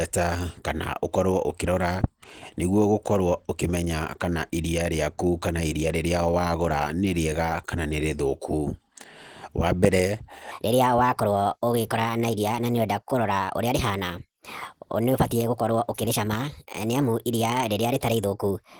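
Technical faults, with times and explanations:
Throughout, Opus voice compression: the speech has a plainly audible coded quality, slightly hoarse and a touch robotic, typical of Opus in its hybrid mode at around 16 kbps. SILK carries the low band with coarse excitation, and a thin CELT layer handles the top, in 20 ms frames.
10.51 to 18.80 s, section at the wrong speed: from here to the end the speech runs about 1.31 times too fast, so it's hurried and pitched up by roughly five semitones. It's most likely been played against the wrong clock, which shifts speed and pitch together.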